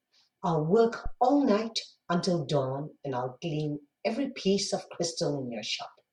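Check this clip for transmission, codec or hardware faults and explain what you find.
There is one hardware fault in this speech clip. A phantom power thump runs from 1.06 to 1.16 s: a supply switched on or off on the live input sends a voltage step through the coupling capacitors, heard as a deep low thump peaking around -21 dBFS and dying away within about 23 ms.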